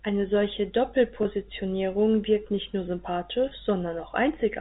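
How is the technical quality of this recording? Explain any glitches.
Two brief glitches interrupt the speech, which comes through telephone-band G.711 coding with nothing above 4 kHz. Both are packet loss with pitch repetition, at 1.23 to 1.25 s and 3.49 to 3.51 s. About 20 ms of audio went missing each time, which fits two lost packets. The receiver filled each gap by repeating the last pitch period. That gives a short, slightly held, buzzy tone before normal speech resumes.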